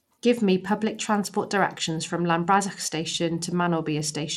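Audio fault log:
Throughout: Bluetooth SBC compression, likely; plainly audible gritty quantisation noise on the speech, nothing above 16.5 kHz, fitting a 96 kbps stream, unlike a clean low-pass.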